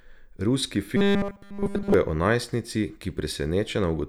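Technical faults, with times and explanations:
0.97 to 1.94 s, robotic sound from repeated short buffers: for about a second the speech becomes a rigid, metallic buzz pitched at 200 Hz, which still loosely tracks the spoken rhythm. The likely cause is audio arriving too slowly, so the playback side loops its last fragment to fill the gap. The entire stretch is made of these loops, and a 200 Hz repeat rate fits a fragment about 5 ms long.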